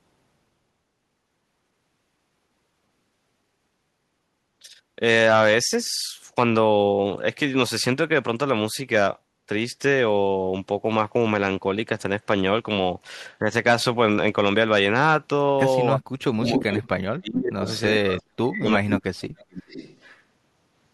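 Speech suppressed in double talk, likely from an echo canceller that could not separate the near talker from the loudspeaker echo while both sides spoke, turns the speech down: a slight dip of about 5 dB at 13.39–13.51 s, then deep cuts of about 40 dB from 15.95 to 17.67 s and from 17.91 to 19.49 s, where the speech drops out in pieces.

Echo leak, likely caused by the far end's echo canceller letting loudspeaker sound back through its microphone, returns a copy of the speech about 0.42 s late. The copy arrives at 16.55–16.79 s at roughly full level, then as quieter scraps at 17.67–17.8 s, 18.08–18.22 s, 18.92–18.97 s and 19.52–20.21 s, about 5 to 20 dB down.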